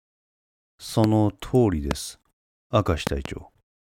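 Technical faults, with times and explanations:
1.04–1.06 s, 1.91–1.93 s and 3.07–3.28 s, loud pop: sharp transients sit on top of the speech, which continues underneath. The first peaks about 15 dB above the speech, the second about 20 dB, and the last is a double pop at about 20 dB. These are likely voltage steps or pulses, from a connector, switch, static discharge or driver glitch, that the downstream circuitry shapes into a brief, percussive burst.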